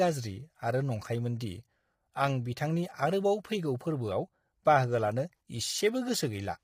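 Throughout the speech, voices sound rough and grainy, with noise between harmonics and a dulled top band. This is likely low-delay AAC compression, fitting a bitrate near 24 kbps.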